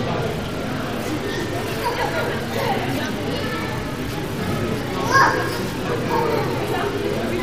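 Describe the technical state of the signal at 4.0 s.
At 4.0 s the signal is intact, with no technical fault to be heard.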